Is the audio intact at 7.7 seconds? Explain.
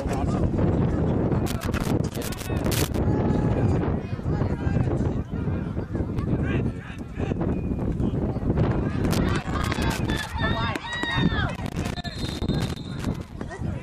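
Yes, at 7.7 seconds the audio plays through cleanly with no dropout, click, distortion or other fault at that point.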